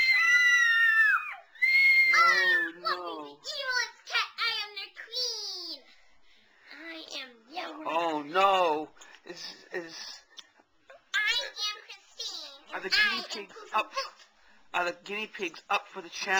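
A fine hiss and grainy roughness ride on the sound for the whole clip, thickening on loud passages and bright, high-frequency content and dropping away entirely when the audio goes quiet. This is sample clock jitter: the converter's timing wanders by something on the order of 2 microseconds, so each sample lands slightly early or late. Where the waveform moves steeply, that timing slip becomes an amplitude error, here sitting roughly 30 dB below the signal.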